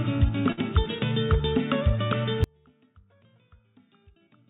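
At 0.52 s the sound briefly smears into a held, fading tail for about 50 ms, then jumps ahead with roughly 60 ms missing. This is a burst of packet loss: the receiver extended the last audio to cover the gap, then skipped past the lost stretch.

From 2.44 s to the end, the sound cuts off abruptly, leaving only a faint trace about 35 dB below the normal level, with everything above 4 kHz missing as on a narrowband call codec. This is likely an audio dropout to a faint residue, where the signal was lost but the path stayed live.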